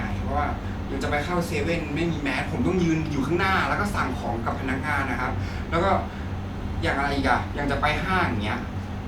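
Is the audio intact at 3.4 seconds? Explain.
Yes, at 3.4 seconds the speech runs through cleanly with no dropout, click, distortion or other fault to be heard.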